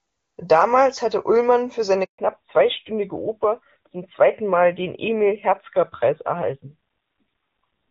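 A handover gap at 2.04 to 2.18 s: while the call switched networks, no speech frames arrived, so the voice cuts out for 140 ms and that stretch is lost. A fallback to narrowband follows at 2.18 s and lasts to the end. Everything above 4 kHz disappears, leaving the voice duller and rougher than the clear HD Voice opening. This fits a drop from AMR-WB at 23.85 kbit/s to AMR-NB at 7.4 kbit/s.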